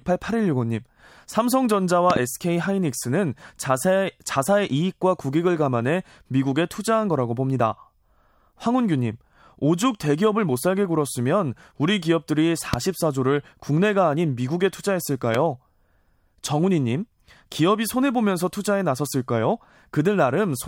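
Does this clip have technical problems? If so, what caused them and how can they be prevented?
Yes. Loud pops, sharp bursts about 15 dB above the speech, which continues underneath, occur as a double pop at 2.10 to 2.19 s and single pops at 12.74 to 12.76 s and 15.35 to 15.37 s, likely voltage spikes from static, switching or a loose connector. Secure all connections and avoid switching equipment while recording.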